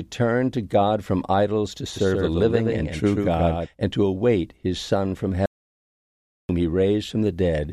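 From 1.96 to 3.66 s, just after "from idols to" and ending before "and to await his", the speech carries a doubled audio track. A second full-band copy trails the original by about 150 ms at roughly 5 dB lower, likely because the signal was captured again through a slower path. Unlike a room echo or reverb tail, this copy has no decay and no added room colour, and it switches on and off abruptly at both ends.

From 5.46 to 6.49 s, an audio dropout to silence removes about 1.03 s. The speech is cut off mid-flow and then resumes just as suddenly. The likely cause is a lost input, such as a disconnected device or a failed link, while recording continued to write silence. What separates it from a natural pause is the gap itself: it is silence, with no room tone or background hiss underneath, and the speech in that span is gone.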